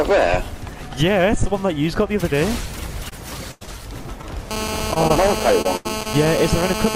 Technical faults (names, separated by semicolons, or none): short concealed packet loss; repeated packet loss (robotic sound); GSM phone buzz; burst of packet loss